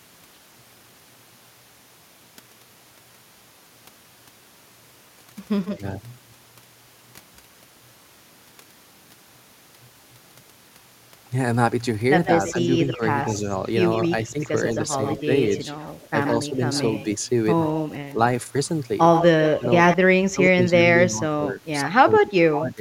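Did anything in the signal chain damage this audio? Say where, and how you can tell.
Yes, at the call-processing stage. An echo leak is heard as a delayed copy of the speech at 5.65–5.74 s (150 ms late, about 20 dB down), 12.25–18.13 s and 19.13–19.97 s (both 123 ms late, about 15 and 5 dB down). The likely cause is a far-end speakerphone whose echo canceller let some pickup through.

Speech suppressed in double talk shows as the talker dipping while the other side is active. At 5.71–5.83 s and 12.53–14.38 s it drops about 10 dB, over a tenth and a fifth of a second. From 19.58 s to the end it drops about 20 dB, over roughly two seconds. The canceller is likely attenuating overlapping speech along with the echo.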